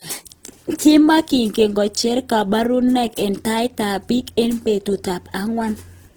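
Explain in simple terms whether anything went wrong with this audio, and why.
Opus compression damage runs through the whole clip, from start to finish. The speech sounds rough and grainy, with a fizzy, noisy texture where smooth tones should be. The likely cause is squeezing the file down with the Opus codec. When it runs short of data, it keeps the overall loudness of each frequency region but fills in the missing detail with copied or noise-like sound, so the speech keeps its full brightness yet turns coarse.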